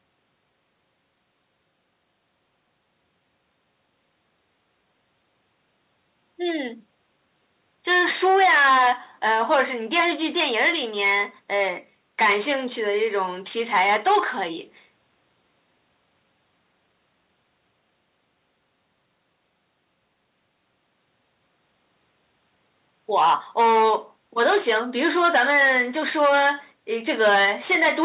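No faults in the speech; the call path leaves nothing above 4 kHz, which fits G.711 A-law telephone coding and is normal for that path.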